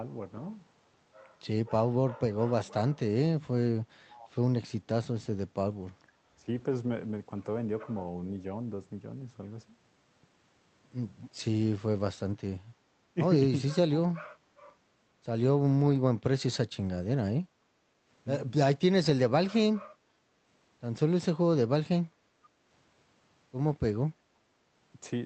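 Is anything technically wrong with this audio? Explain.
Yes, there are two faults. Speech suppressed in double talk, 6.36 to 6.49 s: the voice briefly dips by roughly 15 dB, likely because the echo canceller mistook overlapping talk for echo and ducked both.

Background gated by the echo canceller, 17.65 to 18.06 s: while loudspeaker audio played, the canceller clamped the microphone, so room sound drops by about 7 dB, then returns.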